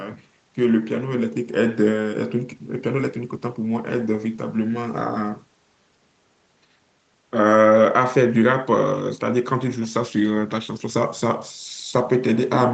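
No technical faults are audible.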